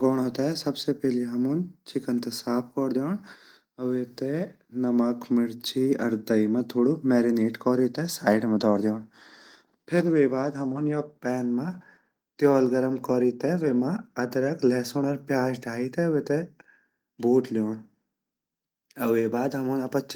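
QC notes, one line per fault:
No faults to note.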